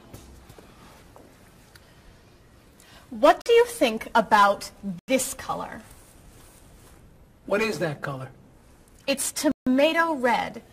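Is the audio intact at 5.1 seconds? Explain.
No. The sound drops to silence from 4.99 to 5.08 s, a 90 ms gap, and resumes right at 5.1 s. This is likely a Bluetooth stall: delayed packets emptied the headphones' buffer until resent ones arrived.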